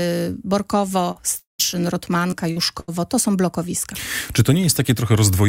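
At 1.11 s a short concealed packet loss occurs: about 40 ms of the stream failed to reach the decoder in time, and the receiver patched the hole by extending the preceding sound for about 39 ms before blending back into the real signal. It comes across as a brief smear or wobble.

From 1.39 to 1.61 s the audio stops arriving for about 200 ms, most likely a long network dropout. The receiver first carries the last sound forward as a buzz or hiss that fades away, and about 140 ms of the gap ends up as silence. When the signal returns it picks up further along, with the stretch in between simply gone.

Further short concealed packet losses follow at 1.71, 2.31 and 2.52 s. In each, a bit of audio went missing and was replaced by a continuation of the preceding sound: about 19 ms at 1.71 s and about 16 ms at 2.31 s, each covering a 20 ms hole, then about 37 ms covering 40 ms at 2.52 s. Each registers as a brief smear or wobble.

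From 2.80 to 2.90 s a burst of packet loss removes about 80 ms in a row. The receiver holds the last sound for about 78 ms while turning it down, so it becomes a fading buzz or hiss, and then playback resumes further on with that piece missing.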